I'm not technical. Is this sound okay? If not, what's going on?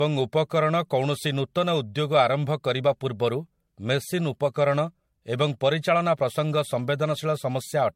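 No. Throughout, the speech sounds swirly, hollow and smeared, with blurred consonants. This is generation loss, likely from being re-compressed several times, which is worse than one low-quality save.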